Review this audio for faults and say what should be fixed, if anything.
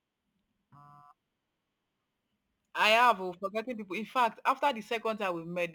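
Crude rate conversion runs through the whole speech recording. The grain fits a 44.1 kHz to 48 kHz change made by repeating the nearest sample without filtering. Its timing error produces an inharmonic fizz roughly 25 dB below the voice, strongest on loud and sibilant passages. To fix it, resample with a proper band-limited converter.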